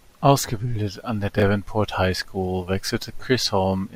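Right after "an der", at 1.38 to 1.42 s, there's a brief jumbled blip: chunks out of order. One 20 ms chunk turned up a chunk late and got played after its neighbour, so nothing's missing, but the swap leaves three hard joins.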